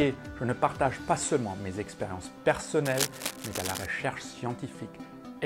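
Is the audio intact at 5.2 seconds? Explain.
Yes, the audio is intact at 5.2 seconds, with no fault audible at that moment.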